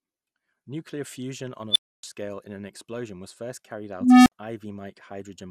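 MP2 compression throughout: the speech sounds dull and gurgling, with upper bands flickering out, likely from MPEG Layer II coding at a low bitrate around 80 kbps.

Unstable filter at 1.71 to 2.03 s, after "on a" and before "scale in an explosion": a runaway recursive filter throws up a tone near 4 kHz that swells within 48 ms, then drops to about 0.28 s of silence. Again at 4.01 to 4.32 s, after "explosion was first carried": a low tone near 300 Hz grows over 0.25 s, then cuts out for about 60 ms.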